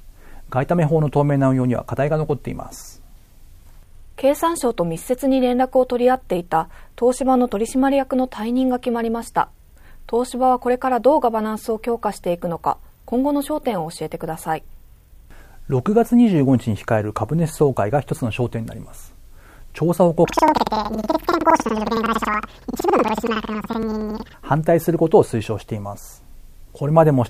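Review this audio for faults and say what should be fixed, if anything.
From 20.25 to 24.41 s the sound jumps an octave high with a 10.8 Hz flutter. This is planar audio read as interleaved: each 92.88 ms block (consistent with 4096-sample blocks) plays twice at double speed. To prevent it, make sure the reader's channel layout matches the decoder's output format, converting planar data to interleaved before playback.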